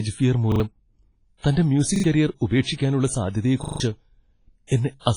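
The speech carries a washy, ringing hiss that swells with the signal and nothing above about 10.1 kHz, likely WMA compression at a low bitrate around 24 kbps, unlike broadband noise that stays steady. At 0.52 to 0.60 s and 1.96 to 2.04 s a repeated buffer makes a 40 ms slice play three times with hard joins, a rhythmic stutter rather than a dropout's silence. At 3.64 to 3.80 s the same slice plays five times, a longer stutter that skips about 150 ms of speech. At 4.67 to 4.71 s pre-echo puts about 45 ms of hiss before a sharp attack and softens it. Unlike a click, the noise builds ahead of the onset.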